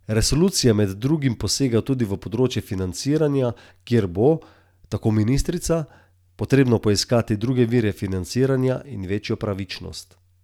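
At 0.48 to 0.50 s, a single sharp loud pop sits a few decibels above the speech, just before "med drugim posega tudi", while the talking carries on beneath it. It is likely an electrical pulse, from a plug, switch or static discharge, added to the signal.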